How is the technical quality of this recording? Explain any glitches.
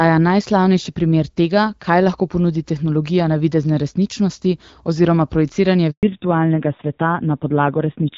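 The recording is clear HD Voice speech, which fits AMR-WB at about 12.65 kbit/s with only light codec texture, until two linked faults near the end.

A handover gap runs from 5.91 to 6.03 s, right after "navidezne resničnosti oziroma projiciranje". For 120 ms the call switched networks and no frames arrived. The voice fades quickly into clean silence, not the stutter of scattered packet loss.

A fallback to narrowband follows from 6.03 s to the end. The new link uses an older codec, which fits AMR-NB at about 5.9 kbit/s. Nothing above 4 kHz remains, and the speech sounds both duller and raspier. That added roughness is what separates it from simple low-pass filtering.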